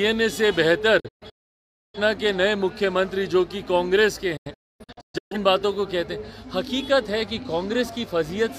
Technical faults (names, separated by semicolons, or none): digital broadcast dropout